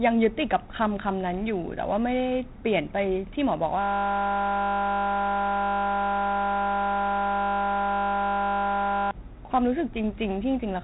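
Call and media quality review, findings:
4-bit ADPCM compression, throughout. Gritty hiss riding on every loud passage, rising and falling with level. Sharp speech onsets distorted where the step size lags. Nothing above 3.9 kHz, which points to an 8 kHz sample rate. Heavy codec damage consistent with 32 kbps ADPCM encoding.

System hang loop, 3.81 to 9.11 s. Steady 50 Hz buzz replacing the speech for over 5 s. Probable component: audio driver or host stalled while the output hardware kept replaying one 20 ms slice of its ring buffer, 265 passes.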